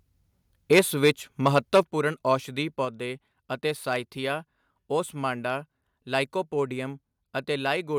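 Input gain likely set too high drives the converter into microphone overload from 0.72 to 1.1 s, with peaks about 7 dB over full scale. Roughly a few percent of samples have their tops sheared flat, giving the loudest syllables a harsh, crackly edge. Within that stretch, at 0.79 s, software likely reacting to the clipping steps the microphone volume down by 2 dB, and voice and background drop together. A second microphone overload, again likely from excessive input gain, runs from 1.46 to 1.8 s at about 5 dB over, with the same gritty crackle. The microphone volume is then likely stepped down again, by 6 dB at 1.83 s right after the distorted peak and by a further 3 dB at 2.85 s. Each step is an abrupt fall in the whole level, background included.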